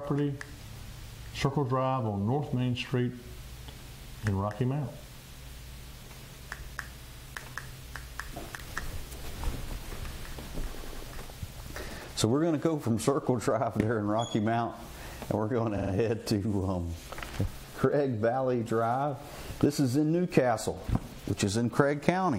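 At 10.75 to 11.03 s there's a stutter from repeated frames: a chunk of about 93 ms (which fits four compressed frames) plays three extra times, stretching the audio by about 279 ms. At 15.77 to 15.91 s, a shorter 46 ms block repeats three more times, adding about 139 ms.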